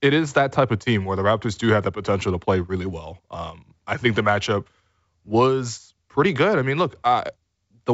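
No technical faults occur at any point in this speech, which comes through 64 kbit/s G.722 wideband telephone coding, so there are none to describe in time order.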